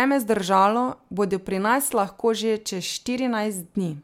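Speech, with no technical fault to report. Nothing in the recording calls for a time stamp or a cause.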